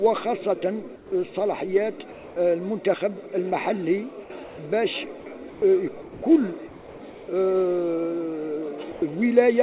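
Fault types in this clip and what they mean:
Sound dropped by the voice detector: five brief gaps, such as 0.96 s and 6.02 s, where sound becomes flat noise, likely misjudged as background; the spectrogram shows featureless smears.
Comfort noise in place of the background: at 2.12 s and 6.68 s, the real background becomes steady synthetic hiss, likely from pauses in transmission; the waveform envelope goes flat and textureless.
Sound chopped by the voice detector: between 5.2 and 5.62 s the sound cuts in and out, likely from the detector toggling; the spectrogram alternates detailed slices with uniform noise.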